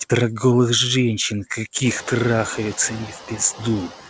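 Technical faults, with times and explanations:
Throughout, noise suppressor artifacts: steady background noise is pulled down by about 11 dB between words and comes back up under the speech. Room noise, which rises by about 18 dB around 2 s, is then squeezed the same way.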